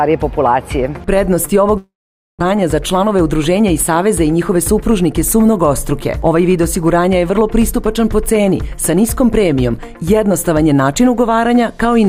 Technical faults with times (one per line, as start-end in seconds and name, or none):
1.77-2.43 long network dropout